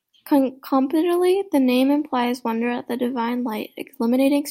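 Nothing in this recording trips the ear as a technical fault, so there's nothing here to point to along the way.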